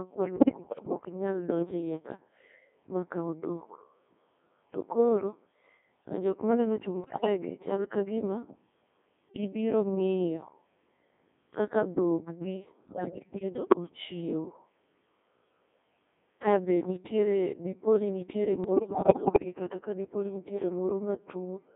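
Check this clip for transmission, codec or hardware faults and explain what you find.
Two faults here, both on a digital voice radio link.

The whole clip runs through the Codec 2 vocoder at 1.6 kbit/s, band-limited to 200 Hz to 3.5 kHz. Only pitch, voicing, energy and envelope get sent and resynthesised, so the speech is heavily buzzy and robotic.

Bit errors on digital voice radio hit at 0.36 to 1.01 s, 7.04 to 7.26 s, 12.88 to 13.77 s and 18.64 to 19.45 s. Corrupted frame parameters make pitch, level and timbre jump into warbly gibberish, worst in the error bursts that look to be around 15%.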